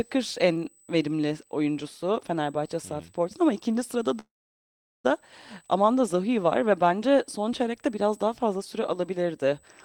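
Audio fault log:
Throughout: USB whine, a steady fixed-pitch tone at 8 kHz sitting about 35 dB below the speech, from 125-microsecond microframe current on the bus leaking through power or ground. A spectrogram shows one thin, unbroken horizontal line at 8 kHz.
4.19–5.06 s: call audio freeze. The last sound carries on briefly and fades, then about 760 ms of near-silence. Speech resumes where it stopped, so nothing is lost but it arrives 850 ms later, likely because delayed packets emptied the jitter buffer. The waveform shows a short decaying tail, then a flat gap.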